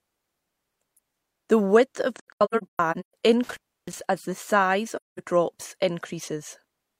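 From 2.16 to 3.14 s, just after "width of", there is AAC frame loss with muting. About 0.6 s of audio is missing, scattered as gaps across nearly a second, with the longest run around 150 ms. The decoder zeroes each missing frame's spectrum, and the overlapping transform windows smooth the edges. Each hole therefore fades out and back in, which marks it as a decoder fault rather than a physical break.

An intermittent contact follows between 3.44 and 4.01 s, ending just before "as the size". A loose connection opens for about 311 ms. Unlike the codec gaps, the signal drops abruptly with crackle at both edges. A faint hiss remains under the gap instead of digital silence, showing that the line itself was briefly open.

From 4.96 to 5.20 s, right after "as the size", there is a second AAC frame loss with muting. About 213 ms drops out with the same soft fade at each edge.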